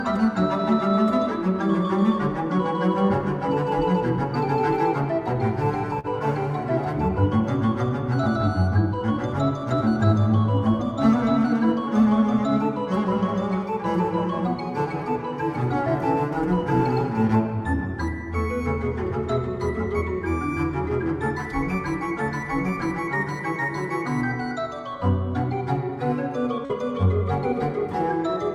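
Two bits of short concealed packet loss, at 5.99 s and 26.65 s: about 40 ms went missing each time, and the receiver patched it by extending the previous sound, leaving a quick smear.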